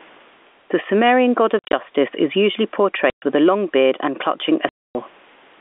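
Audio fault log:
Throughout: gain pumping. Input gain is likely set far too high, so a fast limiter clamps each loud sound; the gain swings about 10 dB.
1.59–1.73 s, 3.10–3.22 s, 4.69–4.95 s: packet loss filled with silence. Lost packets, fitting 10 ms packets, were replaced by silence, leaving hard-edged holes: scattered gaps before "is usually" (longest 50 ms), 120 ms before "with a long beard", 260 ms after "long beard and clutching".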